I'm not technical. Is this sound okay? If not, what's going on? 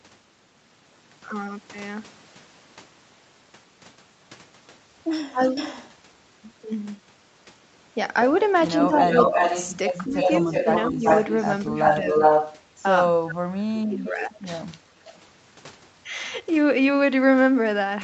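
No. In five places the voice suddenly dips or partly drops out for a moment: at 5.3 to 5.41 s, 6.62 to 6.71 s, 8.87 to 9.09 s, and in longer broken stretches from 10.05 to 12.07 s and 13.31 to 14.94 s. The deepest gaps are at 5.3 s and in the last stretch. This is speech suppressed in double talk, likely caused by both people talking at once. The call's echo remover couldn't tell the talker apart from the other side's sound, so it turned everything down.

You can also hear a delayed repeat of the voice, an echo leak. A brief, quieter one comes from 5.41 to 5.91 s, trailing by about a third of a second. A longer one, nearly as loud as the speech itself, runs from 8.95 to 14.11 s, trailing by just under 0.4 s. The likely cause is a speakerphone on one end whose echo remover didn't fully clean what its microphone picked up, so the voice it was playing was sent back.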